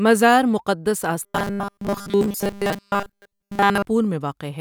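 From 1.23 to 3.85 s, robotic sound from repeated short buffers: new audio was likely arriving too slowly, so playback kept looping its most recent short slice in place of the real signal, with most of that stretch filled by repeats. The steady buzz at 200 Hz points to a repeated slice about 5 ms long. The speech turns hard and metallic, while its rough shape still comes through.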